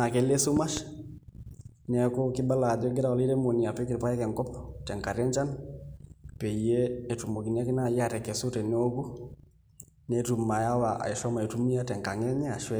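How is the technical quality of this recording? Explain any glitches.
There's one glitch worth flagging: a loud pop early on, between 0.57 and 0.80 s. It's actually two sharp pops in quick succession, jumping well above the speech, which carries on underneath. That's likely a voltage spike from a plug, switch or static discharge hitting the signal path.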